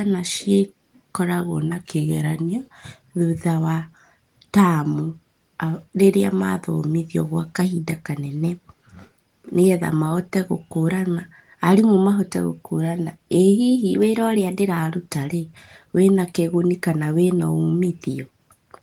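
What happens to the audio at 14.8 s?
At 14.79 s a drift correction step ends. From 13.96 s the speech ran 5.8% fast and 97 cents high, likely from clock-matching software adjusting its buffer. On a spectrogram the harmonics sit raised across that span, then drop back abruptly.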